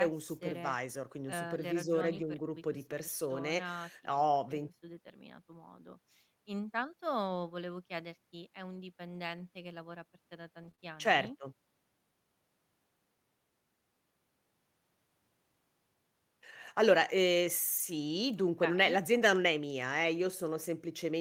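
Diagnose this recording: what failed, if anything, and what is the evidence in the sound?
Network packets were lost and the lost packets were rebuilt from error correction, using low-bitrate copies carried in later packets. The speech turns briefly rough and noisy at 2.15–2.33 s, 4.13–4.19 s, 10.63–10.69 s, 16.68 s and 17.78 s.

Short concealed packet loss occurred at 10.71–10.75 s and 10.75–10.80 s, where audio arrived too late and the decoder extrapolated the preceding sound, leaving a brief smear or wobble.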